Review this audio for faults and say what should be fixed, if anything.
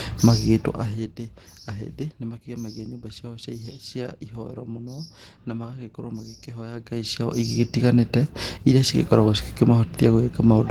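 Opus voice compression is plainly audible across the whole speech clip. The sound is hoarse and slightly robotic, which fits a low bitrate around 16 kbps in hybrid mode. Below 8 kHz the linear-prediction layer codes the excitation coarsely. Above it, a transform layer fills the band up to about 20.1 kHz with sparse, approximate energy. On a spectrogram the upper band looks patchy and smeared, with blocky changes at a steady 20 ms frame rate. To prevent it, encode at a higher bitrate or keep an uncompressed master for editing.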